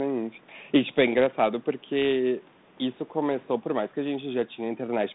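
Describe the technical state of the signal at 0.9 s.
At 0.9 s the speech is intact, with no fault, carrying only the normal narrow telephone band of a 32 kbit/s G.726 line with the low bass trimmed by the call microphone processing.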